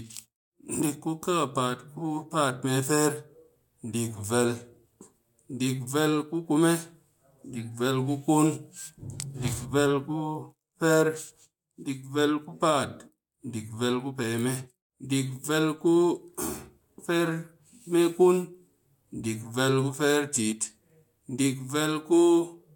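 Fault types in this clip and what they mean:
No technical faults can be heard in the recording.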